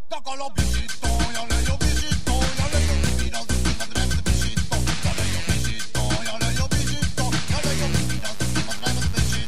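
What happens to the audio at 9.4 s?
At 9.4 s a mains buzz is present. It starts at 7.59 s and runs to the end of the clip, about 20 dB below the signal. Sharp switching spikes, twice per 50 Hz cycle, produce a raspy tone with harmonics reaching several kHz. A plain hum would be a smooth, low tone without that upper spread.

A DC offset of about -24 dBFS also runs through the whole clip, so it is present at 9.4 s too. The entire waveform is shifted off zero by a constant amount, which uses up headroom. It is inaudible and appears as fixed energy at 0 Hz. A rumble would rise and fall instead.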